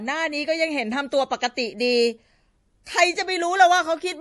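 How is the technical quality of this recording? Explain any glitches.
The recording is clearly degraded. Heavy MP3 compression is likely the cause, and it runs throughout the speech. Nothing sounds above 11.5 kHz, so the treble is cut flat. Weak frequency lines drop in and out between frames, giving a watery, swirly texture. That points to a low bitrate near 48 kbps.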